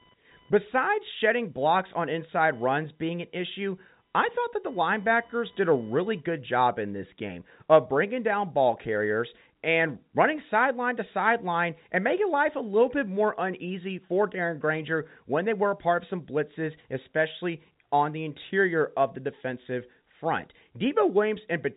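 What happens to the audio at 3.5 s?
Computer load swings are disturbing the audio circuit's shared ground, causing computer activity noise from 0 to 6.53 s, ending before "in this game of": a faint buzz pulsing near 1 kHz, around 40 dB below the speech.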